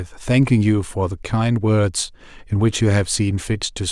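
A bit error spike occurs at 1.94 s in this speech: a single sample leaps by a power of two, peaking at about -24 dBFS, then snaps straight back. One flipped bit in storage or transfer produces exactly this: a lone, sharp broadband tick unrelated to the speech around it.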